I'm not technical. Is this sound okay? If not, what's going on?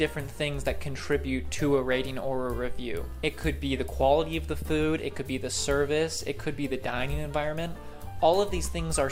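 Yes, the sound is okay. Nothing in it stands out as a technical problem.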